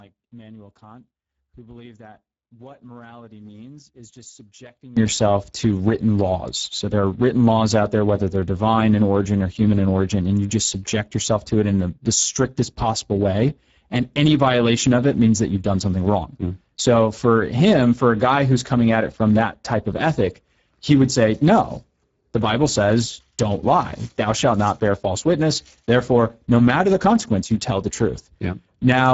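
From 0 to 4.97 s, one stereo channel likely has its polarity inverted, so summing to mono cancels everything the two sides share. The centred speech drops by about 25 dB to a faint residue, returning to full level just before "to written laws".

Throughout the clip, speech passes through the Speex codec at a low setting, which fits a bitrate near 10 kbps. Too few bits for the excitation leave the speech plainly hoarse and noisy, with nothing above 7.7 kHz.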